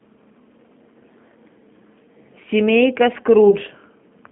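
From start to finish the speech passes through the G.729 codec. The band runs only from 150 Hz to 3.4 kHz, so there is no low warmth and no air on top. The damage is plainly audible. The codec rebuilds each 10 ms frame from a vocal tract model, a pitch predictor and a few pulses. That sparse model makes the sound rough and a little synthetic. The texture fits an 8 kbit/s coder.

From 3.50 to 3.55 s there is VoIP packet loss concealed by the speech codec. About 20 ms of audio went missing, which fits a single lost packet. The decoder filled the gap by repeating its last pitch and filter settings at falling gain. The result is a brief smeared, fading stretch. Each frame depends on the one before, so the speech stays thin and distorted for a short while after the data returns.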